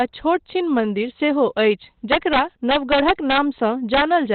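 Opus compression, throughout: the sound is muffled and hoarse, with nothing above about 4.3 kHz and heavy codec damage. This is likely narrowband Opus in its speech mode at a low rate, fitting roughly 12 kbps, where narrowed bandwidth strips the upper spectrum.

Integer overflow at 0.01 s, from 2.12 to 3.38 s, and from 3.94 to 4.02 s: peaks exceeded the integer limit by about 0 dB, about 6 dB and about 3 dB, and wrapped to the opposite sign instead of limiting. The result is cracks sharper than clipping.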